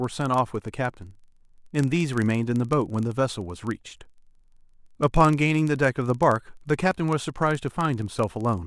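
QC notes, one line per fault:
Throughout: block size mismatch (padded). A buzz at 23.4 Hz runs through the speech, which fits a 1024-sample read block where each incoming block falls slightly short and the remainder is zero-filled. Each block carries a brief silent gap, and playback runs at 0.999 times normal speed with timbre unchanged.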